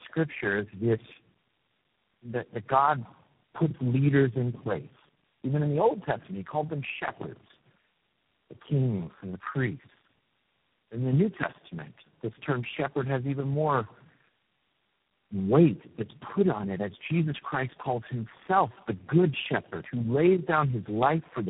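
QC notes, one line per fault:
Throughout: tandem speech coding. The speech passes through about four speech codecs in a row, and the sound points to a chain like AMR-NB, then G.729A twice, then G.726. Each stage re-encodes the previous stage's errors, so roughness, muffling and warble build up. Nothing remains above 3.8 kHz. A single low-rate codec sounds degraded but steady, and band-limiting alone sounds dull but clean. This compounded, gritty warble comes from the stacked stages.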